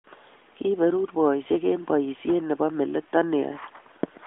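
No technical faults can be heard in this speech recording.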